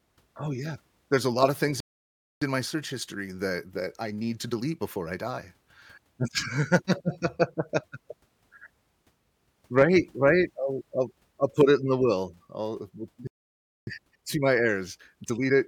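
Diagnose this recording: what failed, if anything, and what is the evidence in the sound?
The fault is a playback stall at the playback stage. The speech goes silent mid-flow from 1.80 to 2.42 s (about 0.61 s) and again from 13.27 to 13.87 s (about 0.60 s), then picks up where it stopped. The likely cause is that the player's buffer ran dry or its thread was blocked, so output halted until data arrived. A network packet loss would clip a few tens of milliseconds and skip ahead. This is a long, clean silence with nothing missing afterwards.

Time-compressed catch-up follows each stall, also at the playback stage. From 2.42 to 5.42 s and from 13.87 s to the end, the speech runs about 1.1 times faster. The player is cutting out small slices and cross-fading the joins to work off the backlog built up during the pause. Because the pitch stays put, this is not a resampling or clock-rate error, which would raise the pitch along with the tempo.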